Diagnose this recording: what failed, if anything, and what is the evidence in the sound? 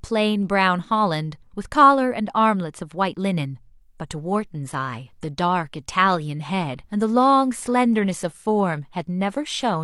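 Adaptive stream at a lower bitrate, from 3.81 s to the end of the clip: a network-stage fault that surfaces in the codec. At 3.81 s the speech abruptly loses clarity with no gap or dropout. The upper band turns hazy and synthetic, and coding artefacts rise. That sound fits the player switching from an AAC rendition of about 96 kbit/s to a 32 kbit/s HE-AAC one as the connection slowed. At that rate, spectral band replication rebuilds the treble from a coarse approximation instead of coding it directly.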